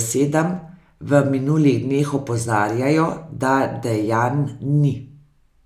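Nothing in the speech stood out as a technical fault on listening.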